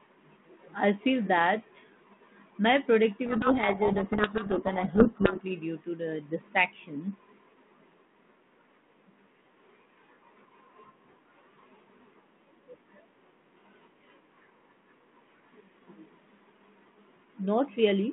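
Speech carried over a 32 kbit/s G.726 telephone path, band-limited to roughly 150 Hz to 3.5 kHz, suffers a codec payload misread from 3.26 to 5.41 s. The G.726 code words arrive in reversed bit order, so the decoder rebuilds wrong sample differences and the speech sinks under harsh, rasping distortion until the packing agrees again.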